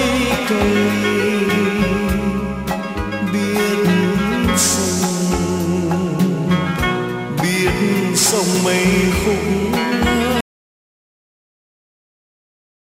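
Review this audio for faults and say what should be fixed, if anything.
At 10.41 s the audio drops out to silence and stays dead until the end, about 2.5 s later. The input was likely lost through a disconnected device, failed link or accidental mute while the recorder kept writing zeros. It differs from a fade-out or noise gate: the cut is instant, with no taper or decay tail, and the gap holds silence with no room tone. Secure connections and monitor input levels throughout recording.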